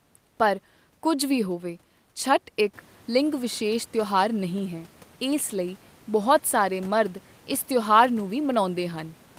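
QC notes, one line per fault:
No fault found. Room noise rises by about 11 dB at around two and a half seconds and then sits about 30 dB below the speech.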